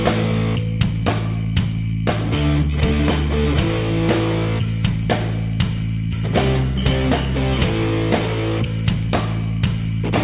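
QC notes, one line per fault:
Nothing stood out on listening.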